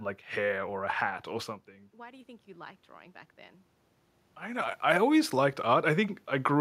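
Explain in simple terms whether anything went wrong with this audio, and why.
Yes, one thing went wrong. Just after "a hat or something", from about 1.91 to 3.69 s, automatic gain rising kicks in. The volume control turns everything up gradually, and the room noise swells along with the voice, which is how it differs from a talker simply moving closer.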